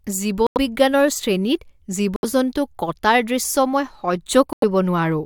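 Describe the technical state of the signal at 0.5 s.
Corrupt frame muted from 0.47 to 0.57 s: damaged compressed frames were rejected by the decoder and replaced with silence, leaving an abrupt hole of several frame lengths while the timing holds.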